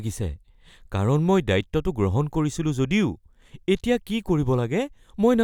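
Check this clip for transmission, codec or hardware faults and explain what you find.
Nothing in the speech points to a transmission, codec or hardware fault. No dropout, distortion or other disturbance can be heard at any point in the recording.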